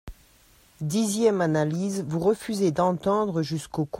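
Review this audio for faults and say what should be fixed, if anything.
Nothing needs to be fixed, as no faults turn up on review of this speech audio.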